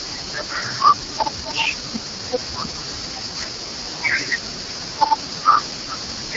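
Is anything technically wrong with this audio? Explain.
Yes. Throughout the speech the sound carries heavy AMR wideband (HD Voice) codec damage. It is rough and raspy, as if gritty and buzzing. The coder rebuilds speech from a pulse-excited vocal tract model and substitutes shaped noise for the top band, and this harshness fits its lowest 6.6 kbit/s mode. On a spectrogram, harmonics look smeared and noisy, the top band is hazy, and nothing appears above 7.6 kHz. The waveform shows blurred, irregular pitch pulses.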